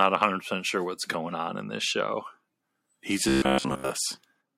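From 3.29 to 3.90 s, the speech collapses into robotic sound from repeated short buffers. It becomes a rigid, metallic buzz at 66.8 Hz, roughly following the words. The likely cause is fresh audio arriving too seldom, so a 15 ms chunk loops for most of that stretch.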